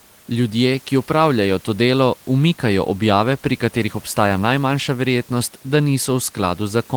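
No technical faults are audible.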